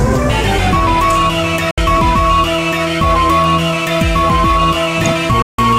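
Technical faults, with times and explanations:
1.71–1.78 s and 5.42–5.59 s: digital broadcast dropout. Sound mutes abruptly, with a 3 ms fade, for 64 ms then 160 ms. This fits a receiver losing frames and muting. That audio is gone.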